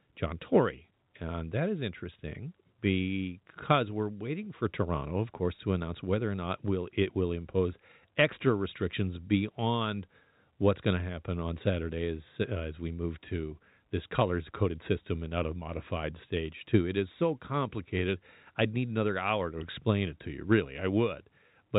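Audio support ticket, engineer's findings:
Nothing stood out on listening to the speech, which carries the narrow telephone band expected of its G.711 A-law path.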